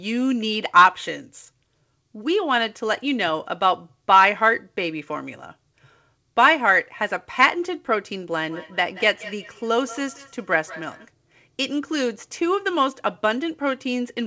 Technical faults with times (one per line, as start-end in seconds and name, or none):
8.39-11.11 feedback echo between two devices